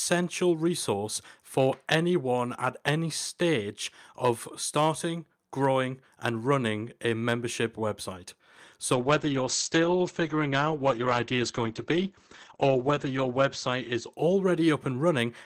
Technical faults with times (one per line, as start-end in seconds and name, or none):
8.94-15.41 call bitrate drop